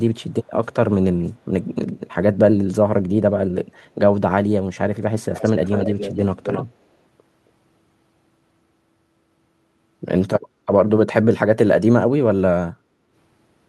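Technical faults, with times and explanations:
6.42 to 6.66 s, echo leak: a faint second copy of the speech trails the original by about 269 ms, sitting somewhere around 10 dB below it. The likely cause is the far end running on a loudspeaker, with its echo canceller missing part of what the mic caught and sending that leftover back down the line to us.
10.49 to 10.65 s and 12.77 to 13.12 s, background gated by the echo canceller: the room tone sags by about 7 dB at its deepest, briefly the first time and for a bit under half a second the second time, then comes back. That's the canceller clamping the mic down while the loudspeaker was active and releasing it afterwards, which is why the ambience seems to duck and then pop back in.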